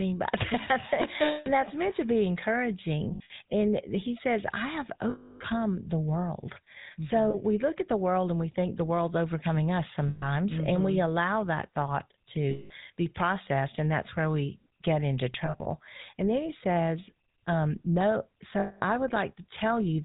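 The speech is carried throughout by the GSM full-rate codec, with plainly audible damage consistent with its 13 kbps mode. The codec models the vocal tract and excites it with a sparse, regularly spaced pulse train, so the voice has a buzzy, gravelly texture. Nothing above 4 kHz survives, which leaves the speech dull and band-limited and takes away the sibilant detail.

Lost GSM frames break into the speech at 1.24 to 1.48 s, 3.14 to 3.31 s, 5.10 to 5.41 s, 7.30 to 7.35 s, 10.08 to 10.25 s, 12.50 to 12.72 s, 15.46 to 15.67 s and 18.60 to 18.83 s. At each gap the decoder repeats the parameters of the last good frame, so the sound holds as a rough, metallic ring. The longest gap, at 5.10 s, lasts about 300 ms, a length that fits roughly 15 consecutive 20 ms frames. The gaps at 3.14 and 15.46 s are scattered losses, with the longest single dropout around 70 ms and 40 ms.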